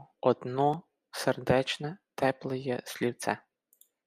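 At 0.74 s there is a block of digital silence. It lasts about 1.3 ms. For that instant the speech drops straight to zero and comes back with no fade. The two hard edges sit so close together that they merge into one tick. The block is too short to hear as a gap. Its length fits a 64-sample buffer that was not filled in time, and the output played zeros in its place.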